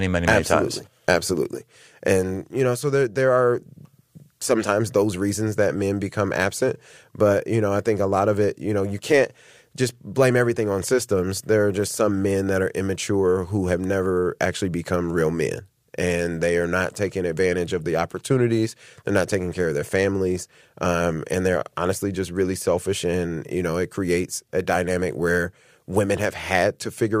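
No technical faults can be heard anywhere in this speech recording. There is nothing to place on a timeline, as no event interrupts or alters the audio at any point.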